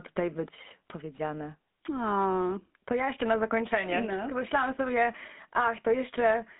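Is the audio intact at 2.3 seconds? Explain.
No. At 2.3 seconds, as throughout the clip, the speech carries the GSM full-rate codec. The vocal tract is modelled and driven by regularly spaced pulses, with only every third excitation sample kept, which fits a 13 kbps coder. That gives a plainly buzzy, gravelly roughness. Nothing survives above about 3.7 kHz, and the band runs roughly from 150 Hz to 3.6 kHz. Unlike a plain telephone filter, which only muffles, this adds that grainy buzz.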